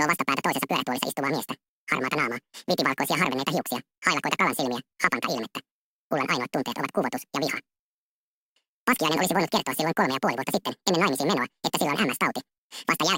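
From the very start and all the way through, the audio is read two samples at a time, so everything plays at double speed and a full octave, 12 semitones, too high. The reader has treated each pair of samples as a single frame, as if the stream had two channels or samples twice as wide, so it skips through the material twice as fast. The result sounds rushed and chipmunk-like.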